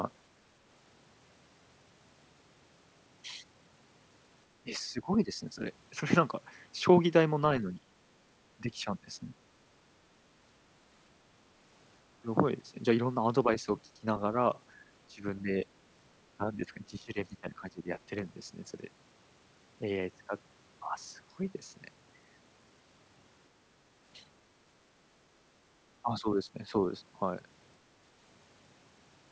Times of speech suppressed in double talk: 4.62-5.59, 7.62-7.85, 8.57-9.38, 13.45-14.07, 15.08-15.51, 16.37-18.11, 26.02-26.74

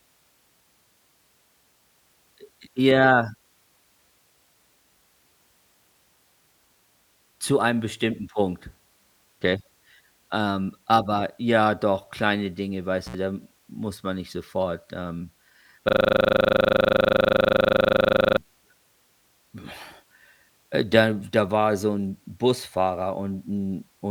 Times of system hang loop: 15.89-18.38

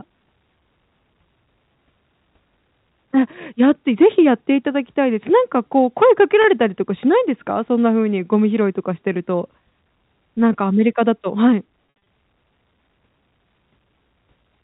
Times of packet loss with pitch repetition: 6.42-6.44, 11.86-12.06

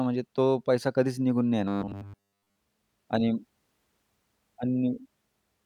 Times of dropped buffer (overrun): none

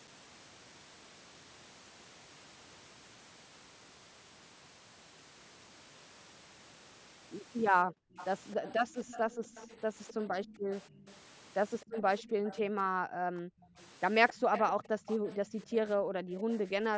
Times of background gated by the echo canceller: 7.85-8.15, 10.52-10.70, 12.29-13.74, 14.39-16.45

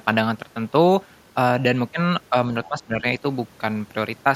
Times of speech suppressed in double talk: 2.68-3.05

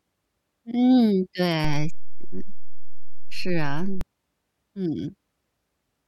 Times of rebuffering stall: none

